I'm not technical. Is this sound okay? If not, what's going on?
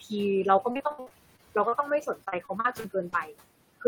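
No, there are two problems. Throughout the clip, a noise suppressor is at work. It cuts down whatever it decides is steady background hiss, recalculating many times a second. That leaves noise suppressor artifacts: the room noise sinks in the pauses and comes back up whenever someone talks. The speech itself can come across thin or watery.

The second problem is repeated packet loss, which gives a robotic sound. From about 0.71 to 1.74 seconds, and again from about 2.24 to 3.14 seconds, pieces of audio kept going missing or arriving too late. Each missing piece was patched by stretching out the sound just before it, and the next gap followed quickly. The longest was about 60 milliseconds, and roughly a quarter of the first stretch was patched this way. So these passages sound choppy, with bits of speech dropping out.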